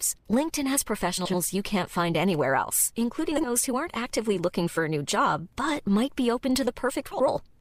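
Frames out of order occur at 1.17–1.36 s (before "you can't find anywhere"), 3.32–3.48 s (after "can't find anywhere else") and 7.11–7.30 s (after "but might be open"). Each time, two adjacent blocks of 80, 60 and 80 ms play swapped. This gives a brief garbled flutter, and no time is lost.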